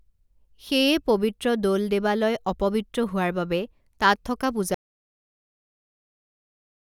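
At 4.74 s the speech drops out to digital silence and stays there to the end; an audio dropout to silence, with no room tone, unlike a fade, likely from lost input.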